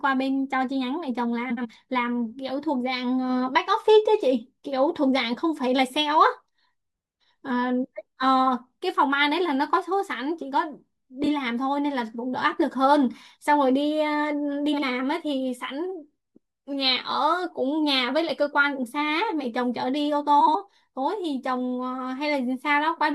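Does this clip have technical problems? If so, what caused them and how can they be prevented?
Yes. Frames out of order: neighbouring runs of coded frames reached the decoder swapped, so short stretches at 1.50–1.66 s, 11.24–11.28 s, 14.73–14.83 s and 20.40–20.56 s play with their halves exchanged. Each sounds like a brief garbled flutter. The swapped blocks are about 70, 13, 46 and 70 ms long, which fits runs of roughly one to three frames. Carrying sequence numbers and reordering packets in a jitter buffer before decoding would prevent this.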